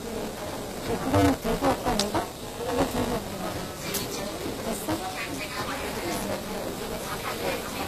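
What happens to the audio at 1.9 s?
Buffer tearing runs through 1.9 s, as it does across the whole clip: writer and reader cross inside each 5 ms period, splicing in a fifth of audio from about 15 ms earlier and producing a 200 Hz robotic buzz. The treble is also gritty and metallic, with nothing above 14.9 kHz, likely from HE-AAC compression rebuilding the highs by band replication at a low bitrate around 24 kbps.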